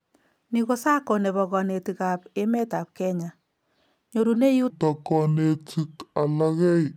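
A section at the wrong speed starts at 4.7 s and runs to the end of the clip, likely because that stretch was played back against the wrong clock so it plays slower than it was recorded. It runs at 0.644 times its original speed, so speed and pitch fall together. The speech suddenly becomes drawn out and sluggish, sitting roughly seven semitones lower, and sounds deep and heavy compared with the natural delivery before it.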